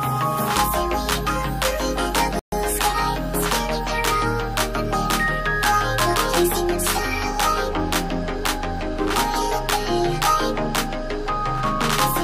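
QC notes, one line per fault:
2.39–2.52 s, playback stall: the sound cuts to silence mid-flow for about 130 ms, then resumes. This gap most likely comes from the player running short of data or its output thread being blocked, so nothing reached the output until it recovered.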